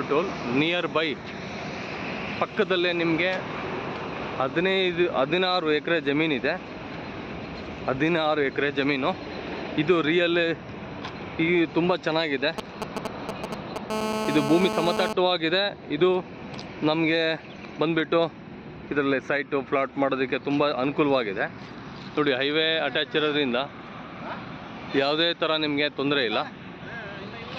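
At 12.58 s the GSM signalling bursts kick in and run until 13.78 s. A 2G phone somewhere close is sending short clusters of radio bursts, and the audio circuitry rectifies them. That's why you get that galloping dit-dit-dit of brief buzzes at about 217 Hz. They come in at roughly the same loudness as the wanted sound, so they're hard to miss.

Just after, at 13.90 s, it turns into a full GSM phone buzz lasting until 15.13 s. The phone has gone to a steady call-style transmission, pulsing 217 times a second, and the rectified pulses give a continuous hard, raspy 217 Hz buzz loaded with harmonics. It bears no relation to the audio underneath and sits only about 2 dB below it.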